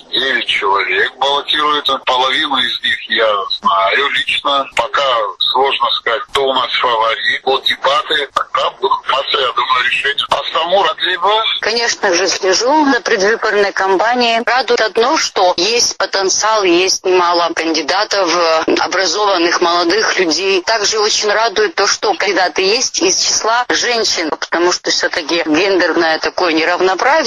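Compressed frames are skipped at 1.88, 7.46, 9.12, 10.87, 12.92, 14.75, 16.43 and 22.27 s. Missing frames make the sound jump ahead, roughly 50 to 200 ms each time.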